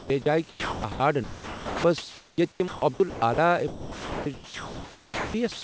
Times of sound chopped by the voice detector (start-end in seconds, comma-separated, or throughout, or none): 0.00-3.38, 3.68-5.64